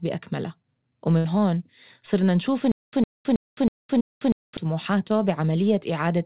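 At 1.18 s a burst of packet loss lasting until about 1.26 s interrupts the speech. The receiver stretches the last sound for roughly 64 ms, letting it fade as a held buzz or hiss rather than going silent, and the speech then resumes with about 60 ms of it gone. Unlike a stutter, nothing repeats here. There is one smooth, decaying fill and then a jump forward. The band-limited sound around it, with nothing above 4 kHz, fits a narrowband call codec of the G.711 kind.

From 2.72 s to 4.57 s there is a stutter with silent gaps. A fragment of about 108 ms plays, then about 214 ms of dead digital silence follows, and the cycle comes back every 321 ms, five times in all. The likely cause is a stalled stream replaying its last buffer at each retry. The true silence between identical repeats is what separates it from concealment, which never goes quiet and never repeats exactly.

Within that stretch, from 3.98 s to 4.02 s, a short concealed packet loss appears. 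About 20 ms of audio is missing, and the receiver synthesises roughly 18 ms to cover it before blending back into the real signal. It comes across as a brief smear or wobble rather than a fading tail, which is far shorter than the burst at 1.18 s.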